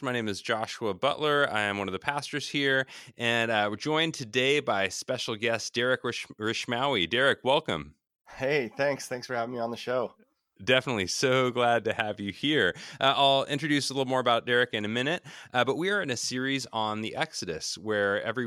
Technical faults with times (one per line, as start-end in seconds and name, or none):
none